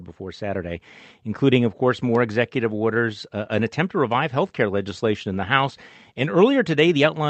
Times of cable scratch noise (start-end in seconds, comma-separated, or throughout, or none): none